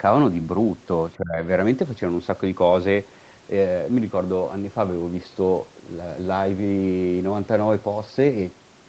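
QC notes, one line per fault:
1.17–1.41 s, speech suppressed in double talk: the echo canceller likely failed to tell the near talker from loudspeaker echo while both sides spoke, so it clamped down on the whole signal instead of just the echo. The speech sinks sharply, roughly 20 dB at its deepest, for about a fifth of a second. The band-limited call audio, with nothing above 8 kHz, carries on around it.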